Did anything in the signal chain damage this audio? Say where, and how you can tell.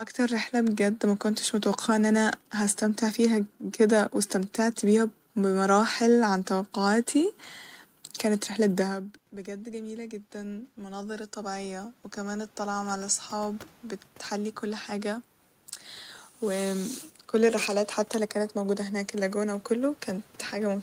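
Yes. The damage comes from call processing, as automatic gain rising. From 8.54 to 15.73 s the level creeps up by about 13 dB, and the room noise swells along with the speech. That shared swell marks it as gain applied after the microphone. The trigger is the talker moving back near 9.0 s, which drops the input by about 17 dB; the AGC then slowly compensates. A second rise starts at 18.15 s, just after "كل الرحلات", and runs to the end.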